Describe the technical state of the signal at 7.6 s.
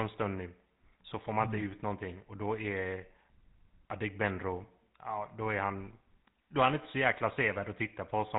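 At 7.6 s the speech sounds buzzy and gravelly, with nothing above 3.8 kHz, as it does throughout the clip. This is GSM full-rate codec damage, which fits a 13 kbps coder that models the vocal tract and excites it with regularly spaced pulses, retaining only every third excitation sample.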